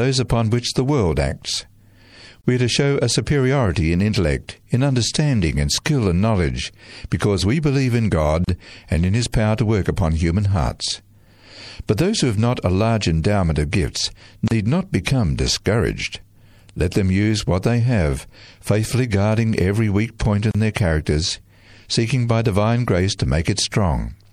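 From the start the whole speech track has a watery, swirling texture with dulled treble and chirpy s sounds, likely MP3 compression at a bitrate that points to around 64 kbps. Weak frequency lines switching on and off between frames cause the swirl. Unlike a plain low-pass filter, the cut top end comes with this metallic flutter.

A gap at a join of encoded pieces opens at 2.41, 8.44 (after "because we believe in", before "and in"), 14.48 (after "large endowment of gifts") and 20.51 s (after "guarding every weak point"). These gaps of 31 to 34 ms, with smeared edges, are the encoder delay and end padding left in where separately encoded pieces meet. They differ from packet-loss dropouts because they recur exactly every 6 s and the speech resumes where it stopped, with nothing missing.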